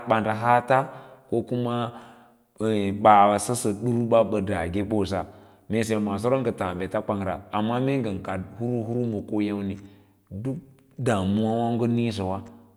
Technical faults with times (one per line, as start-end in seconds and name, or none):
none